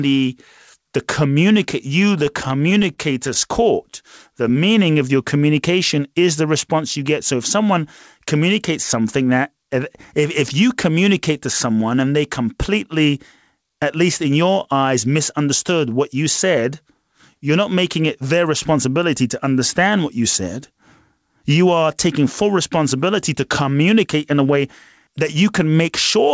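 This is a speech recording that passed through a call path, with nothing above 8 kHz, which fits a wideband codec such as G.722 at 64 kbps. From 2.26 to 3.37 s, just after "the communicate you the", there are repeated stalls, a stutter. The jitter buffer ran empty 11 times. Each time the receiver stretched the last sound until audio arrived. About 127 ms was filled this way, the longest gap 40 ms. Nothing is lost, but the speech drags and catches. From 3.90 to 4.54 s, just before "of your communication is", a jitter buffer slow-down occurs. The receiver repeated single pitch periods to build a reserve. This added 48 ms, so the speech runs at 94% speed. The pitch stays the same, but sounds are drawn out. Two jitter buffer speed-ups follow, where the receiver cut short pitch periods to shrink an oversized buffer. The pitch does not change. From 21.50 to 21.84 s, about 40 ms is removed, giving 109% speed, which sounds hurried. 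From 24.04 to 25.36 s, after "taking full responsibility to", about 70 ms is removed, giving 104% speed.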